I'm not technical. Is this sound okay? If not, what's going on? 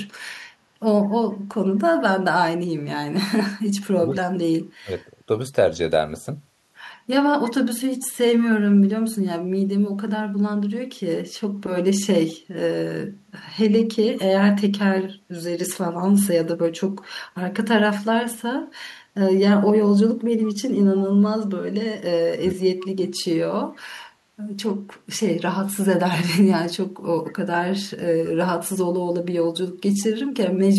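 No, there are two problems. The speech suddenly dips or briefly cuts out three times: from 3.83 to 4.23 seconds, from 4.82 to 4.89 seconds, and from 22.39 to 22.55 seconds. In the first and last of these the voice drops to a much quieter level for a moment. This is speech suppressed in double talk. It likely happens when both people on the call talk at once, and the call software mistakes the talker for an echo and turns the voice down.

Just after that, from 22.83 to 22.88 seconds, a faint, short scrap of voice comes back about 0.16 seconds late, like a tiny ghost of what was just said. This is an echo leak. The likely cause is a phone or computer playing the call through a loudspeaker whose echo removal missed a bit of its own microphone pickup, so that bit was sent back.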